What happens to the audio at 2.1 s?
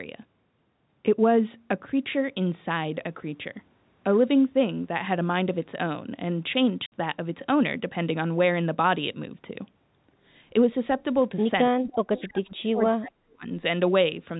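Nothing goes wrong at 2.1 s: the speech passes through intact at that point.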